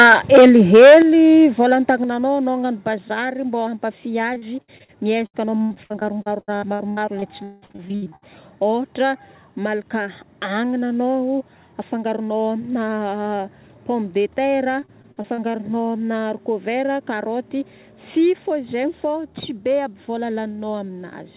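Speech recorded over a call path whose G.711 mu-law coding leaves nothing above 4 kHz, with three kinds of fault. From 0.0 to 0.99 s the loudest syllables carry a harsh, crackly edge from microphone overload: peaks run about 10 dB past the converter's limit and roughly a fifth of the samples are flattened, most likely because the input gain was set too high for the converter. Alongside this, the microphone volume steps down in discrete jumps: about 2 dB at 0.03 s, about 8 dB at 1.02 s and about 6 dB at 2.04 s, with a further step of about 2 dB at 18.36 s. Each is an abrupt drop in both voice and background level rather than a gradual fade, consistent with automatic gain control on the call reacting to the clipped input by cutting device gain one increment at a time. Repeated packet loss gives a choppy, robotic texture in three stretches: 4.34 to 4.90 s, with five gaps up to 62 ms and about a third of the span concealed; 5.26 to 8.24 s, the worst, with 23 gaps, the longest 182 ms, covering about 36% of the span; and 14.80 to 15.56 s, with seven gaps up to 47 ms, about 24% concealed. 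In each, the receiver covers missing audio by stretching the preceding sound, so words lose pieces as holes arrive in quick succession.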